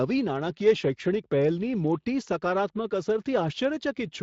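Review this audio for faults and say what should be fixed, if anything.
Speex codec coding is audible across the whole clip. The speech has a noisy, hoarse texture: the CELP coder does not have enough bits to describe the excitation accurately, so the fine structure of the voice is replaced by a rougher approximation. The damage is plainly audible and fits a setting of around 20 kbps. At that setting the region above 8 kHz is a shaped noise fill rather than real detail. To prevent this, capture or export with a modern codec such as Opus at an adequate bitrate instead of Speex.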